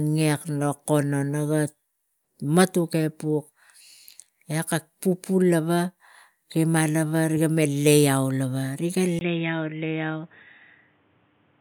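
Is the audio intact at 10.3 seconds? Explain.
No. From 9.19 s to the end, the input likely switched to a poorer device: after a 20 ms gap, speech turns boxy, cut above 3.8 kHz, slightly quieter, with faint new background noise.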